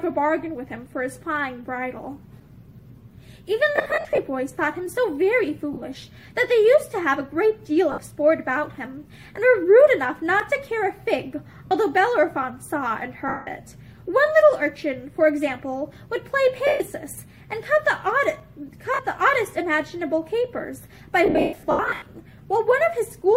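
The audio has lost LE Audio frames at eight points: 3.76, 5.73, 7.92, 11.66, 13.28, 16.67, 18.94 and 21.26 s. Gaps run from 40 ms to 560 ms. At 3.76 and 21.26 s the losses scatter in bursts across 0.4 and 0.8 s. The concealment repeats the last spectrum with random signs, so tones smear into noise. Longer runs, up to about 150 ms, fade toward silence. Light codec damage is also present.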